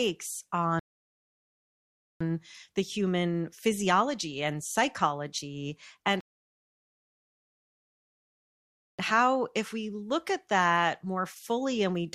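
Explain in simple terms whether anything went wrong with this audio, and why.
Two rebuffering stalls interrupt the speech: silence from 0.79 to 2.21 s, resuming at "the human physiology and", then from 6.21 to 8.99 s between "physiology and psychology and" and "how if we look". The player ran out of downloaded audio and waited for more. Unlike a dropout, nothing is skipped. Speech picks up exactly where it stopped, adding 1.4 s and 2.8 s of waiting.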